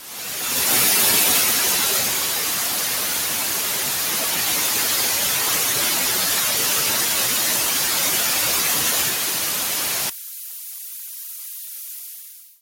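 From the start, a noise suppressor applied to everyday sounds treats steady ambience and decaying tails as noise, pulling them down by a swing of around 5 dB. Onsets pass while sustained parts sink, so the sound pumps and thins. On a spectrogram, tails end abruptly and the background flickers.

At 10.10 s the level drops by about 11 dB through to the end at 12.62 s, leaving a weaker residue. The likely cause is one channel inverted, cancelling the shared centre content when summed to mono. The waveform shrinks sharply.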